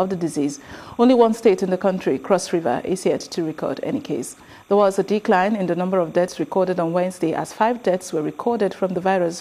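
Timecode bleed runs throughout: a faint chirping warble, well below the sound, flipping between pitches near 1 and 2 kHz at a 30-frame rhythm, unlike a steady single-pitch whine.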